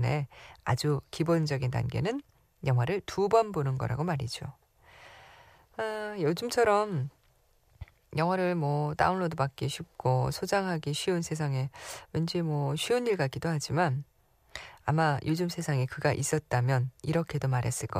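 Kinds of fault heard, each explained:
No audible technical fault turns up in this speech recording; the signal holds steady throughout, with no dropouts, distortion, glitches or level disturbances to point to.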